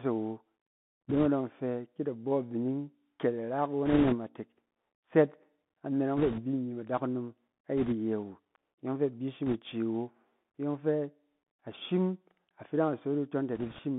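Throughout, the speech carries the Bluetooth CVSD headset codec. This one-bit delta coder has an adapting step that lags behind loud, bright sounds, so sibilants turn scratchy over a granular hiss. The band runs only from about 150 Hz to 3.5 kHz, which fits a 64 kbit/s CVSD link. Unlike the swirly smearing of a wideband codec, the damage here is grainy and narrowband.

Bit errors on a Bluetooth voice link break in at 1.09–1.26, 3.86–4.15, 6.17–6.42, 7.78–7.94, 9.46–9.59 and 13.55–13.80 s. Each is a brief rushing crackle from a few percent of flipped bits, heaviest around 3.9 s. Every CVSD bit nudges the waveform only slightly and errors fade away, so there are no sharp clicks or gaps like those from lost packets.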